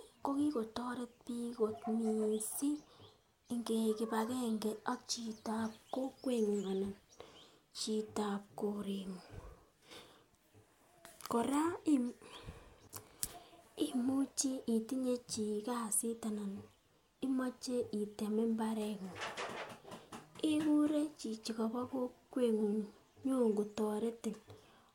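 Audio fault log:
No audible faults detected.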